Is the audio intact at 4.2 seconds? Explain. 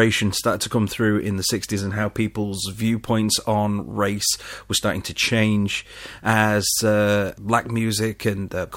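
Yes, the speech at 4.2 seconds plays through intact, with no dropout, click, distortion or other audible fault at that point.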